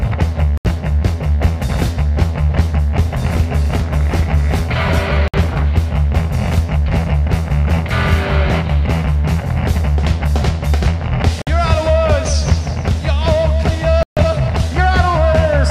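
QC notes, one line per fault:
0.58–0.65 s, 5.28–5.34 s, 11.42–11.47 s, 14.03–14.17 s: Bluetooth stall. The sound drops to silence for 75, 58, 52 and 139 ms, then carries on. Unlike a fade or crackly dropout, each gap is clean and abrupt, likely a headphone buffer running dry while delayed packets were resent.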